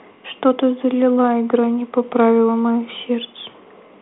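Nothing stood out as a technical fault on listening through this speech.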